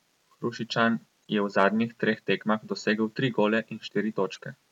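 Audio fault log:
1.23–1.26 s and 4.33–4.39 s: corrupt frame decoded. Damaged bits in a couple of compressed frames each were decoded anyway, putting energy at wrong frequencies. The first is faint; the second much louder, showing as a short, misplaced spectrogram smear.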